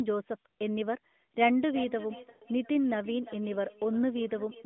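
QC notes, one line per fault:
1.69–4.66 s: feedback echo between two devices, the speech returning roughly every 0.4 s at about -18 dB, repeats dying away as faint, smeared copies on the spectrogram.
2.30–2.44 s: lost AMR speech frames, 120 ms of speech stretched then fading toward silence; waveform envelope decays and spectrogram harmonics blur before recovery.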